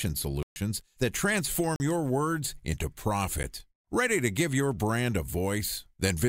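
At 0.43 s the speech drops into a block of digital silence lasting about 133 ms, until 0.56 s, heard as a clear hole with hard edges. A shorter 40 ms block follows from 1.76 to 1.80 s, and at 3.43 s an 11 ms dropout registers only as a tick. In each case a run of samples has been zeroed, most plausibly because the output buffer was not filled in time.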